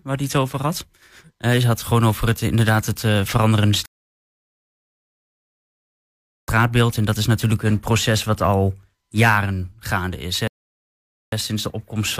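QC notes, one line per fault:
3.86 to 6.48 s, rebuffering stall: the speech drops to silence for about 2.6 s as playback starves for data, then resumes exactly where it stopped.
10.48 to 11.32 s, rebuffering stall: a second, shorter gap of about 0.85 s while the player waits for more audio; nothing is lost, only time added.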